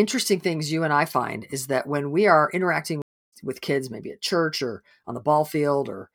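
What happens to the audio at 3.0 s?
A stream reconnect interrupts the speech from 3.02 to 3.32 s, right after "when we are interacting". The connection drops and the player goes quiet for about 260 ms. It then reconnects and starts a new decoder partway through the stream. Playback does not pick up where it stopped. It resumes roughly a fifth of a second further on, so a short stretch of speech is missing when the audio returns at "with kids maybe at".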